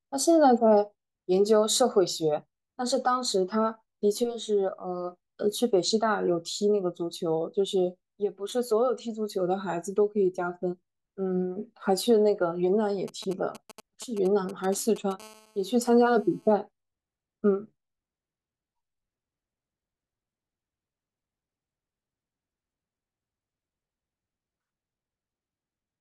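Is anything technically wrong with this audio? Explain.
Yes. Two kinds of radio interference from a nearby 2G phone break into the speech between 13.08 s and 16.53 s.

From 13.08 s to 15.22 s there are GSM signalling bursts. The phone sends short clusters of transmissions while it sets up a connection, and the audio circuitry rectifies each cluster into sound. The result is a galloping dit-dit-dit of brief 216.7 Hz buzzes, around 20 dB below the speech. Its broken, rhythmic grouping sets it apart from the continuous buzz that follows.

From 15.22 s to 16.53 s this gives way to a GSM phone buzz, because the phone has moved into a call and now transmits its 216.7 Hz bursts continuously. After rectification this becomes a hard, raspy, harmonic-rich tone at about 30 dB below the speech, unrelated to the speech itself. Mains hum sits at 50 or 60 Hz and sounds smooth, while this buzz is higher-pitched and harsh. 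It is also steady, where the earlier section was chopped into groups.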